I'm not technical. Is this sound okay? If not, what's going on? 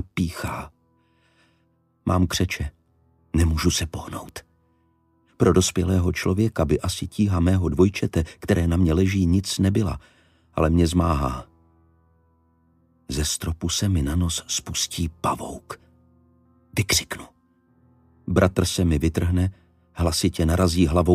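No. There are two sharp ticks, at 0.48 s and 4.29 s. Each is a bit error spike. A single stored number got corrupted for one instant. The sound jumps, then snaps straight back. That leaves a click unrelated to the audio.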